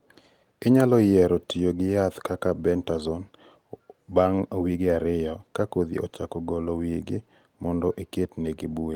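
No technical faults can be heard anywhere in the speech recording.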